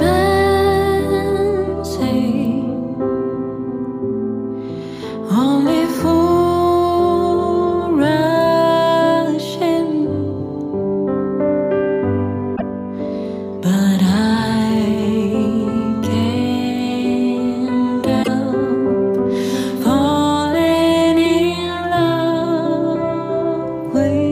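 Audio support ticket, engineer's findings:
Damaged data in a compressed stream, 12.53–12.62 s and 18.20–18.28 s. Corrupt bytes in the encoded file; the decoder misreads frames, loses sync and rescans for the next frame header. Heard as brief blips of roughly 0.1 s each.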